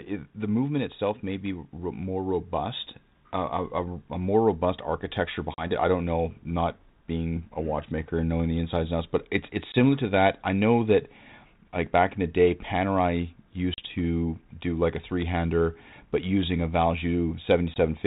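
Hard-edged silent gaps at 5.54, 9.72, 13.74 and 17.74 s (about 40, 20, 40 and 20 ms) end in brief distortion. This is packet loss on an ADPCM call: the missing audio leaves the decoder's predictor briefly out of step.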